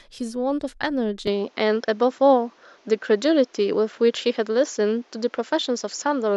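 At 1.27 s the speech abruptly turns duller, with nothing above 7.6 kHz, a level shift of roughly 5 dB and a faint new noise floor around 35 dB down, all with no gap at the change. This likely reflects the input switching to a poorer device, lasting to the end.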